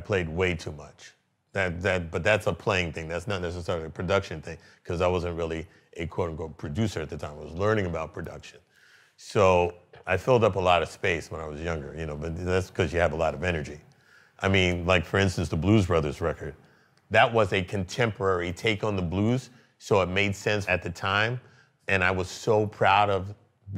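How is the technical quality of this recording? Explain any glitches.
Listening through, nothing in the recording stood out as a technical problem, and there are no glitches to explain.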